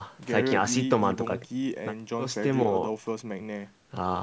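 A speech recording that has passed through a call's microphone processing, with nothing technically wrong in it.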